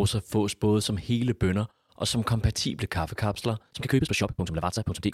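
From 3.58 s to the end, a time-stretched section runs at 1.92 times speed with pitch unchanged, likely software dropping short pieces, so the speech turns rushed.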